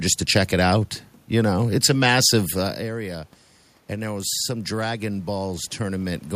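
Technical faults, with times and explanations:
3.89 to 6.31 s, automatic gain rising: after the level fell by about 13 dB, the automatic gain control slowly added about 5 dB. The room noise swells along with the speech, unlike the talker moving around 2.5 s, which changes only the voice.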